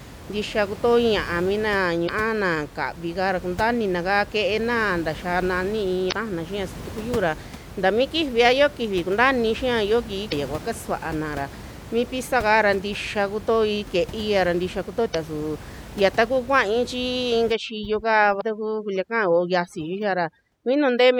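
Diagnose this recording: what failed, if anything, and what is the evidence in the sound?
Damaged data in a compressed stream, at the codec or storage stage: brief glitches of about 40 to 50 ms at 2.05, 6.09, 10.29, 15.11 and 18.37 s. They fall just before "na kavi kaara kuntaainina", just before "kua kasuanara mi pizza", and between "ke'eia ra ntixa" and "suu ya". The decoder misreads corrupted frames, loses sync and jumps to the next header. A spectrogram shows thin broadband vertical smears, and the waveform shows abrupt discontinuities.

Overdone noise removal, at the processing stage: from 17.52 s to the end, the room noise, about 16 dB below the speech, collapses to near silence with twinkling specks. Bands near the noise estimate are cut hard. A spectrogram shows a blank background dotted with isolated sparkles, with patchy speech harmonics.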